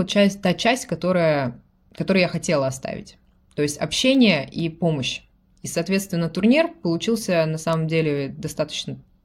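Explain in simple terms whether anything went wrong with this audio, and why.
Something did go wrong. Sharp ticks of uneven strength repeat about twice a second, roughly twenty of them, from 0.12 s to 9.08 s. These are word clock ticks. Two digital devices ran on slightly different clocks, so one sample was skipped or repeated each time they drifted apart.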